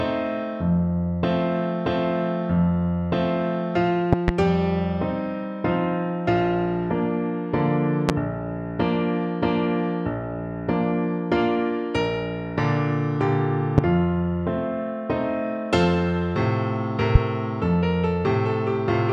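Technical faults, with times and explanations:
4.13–4.31 s, 8.09–8.12 s, 13.78–13.81 s and 17.15–17.18 s, loud pop: sharp, brief pops that jump to roughly 20 dB above the surrounding sound, which carries on unbroken beneath them. The first is a double pop, two hits in quick succession; the others are single. Each is a sudden voltage step or spike, likely from a plug, switch, static discharge or driver glitch, that the following circuitry rounds into a short thump.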